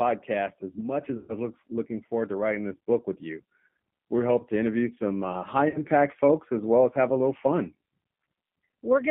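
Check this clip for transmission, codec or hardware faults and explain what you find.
Two faults are present: G.729 codec damage across the whole clip, and two bursts of VoIP packet loss concealed by the speech codec.

G.729 codec, throughout: The speech is squeezed into a telephone band of about 150 Hz to 3.4 kHz and rebuilt from a vocal-tract filter, pitch predictor and a few pulses per frame. The result sounds plainly rough and slightly synthetic, which fits an 8 kbit/s G.729A-style codec. On a spectrogram, nothing appears above 3.4 kHz and the harmonics look smeared; the waveform looks pulse-driven rather than smooth.

VoIP packet loss concealed by the speech codec, at 1.17–1.38 s and 5.69–5.80 s: Packets went missing and the decoder kept extrapolating from its last pitch and filter while lowering the gain. About 120 ms of audio is lost at the first point and 50 ms at the second, which fits roughly twelve and five 10 ms frames. 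Each gap sounds like a stretched, buzzy tone or coloured noise that fades, with the speech staying weak just afterward. A spectrogram shows frozen bands dimming out, and the waveform shows a decaying envelope.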